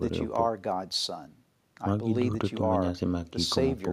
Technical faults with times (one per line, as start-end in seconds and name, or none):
none